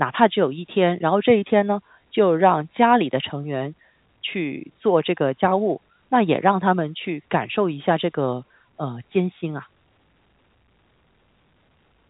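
No technical fault can be heard in this speech clip, which carries the narrow band of G.711 telephone coding with nothing above about 3.8 kHz.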